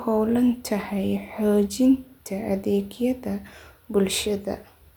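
No technical faults are audible anywhere in the recording.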